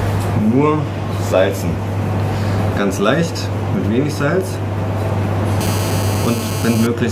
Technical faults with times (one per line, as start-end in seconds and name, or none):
5.61-6.87 GSM phone buzz